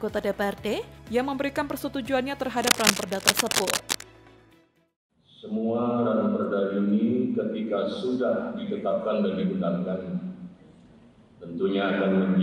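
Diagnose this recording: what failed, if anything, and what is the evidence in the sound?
The fault sits in the analogue wiring. From 2.61 to 4.03 s, dense, ragged bursts of scratching ride over the sound, roughly as loud as the sound itself. This is cable scratch noise. A worn cable or connector was likely flexed, making its contact resistance fluctuate rapidly.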